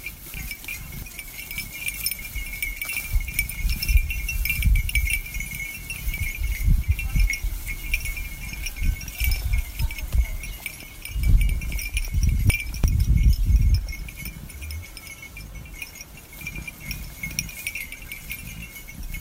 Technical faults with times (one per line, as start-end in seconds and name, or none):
0.34-1.02 chunks out of order
6.18 audio missing between chunks
11.81-12.84 chunks out of order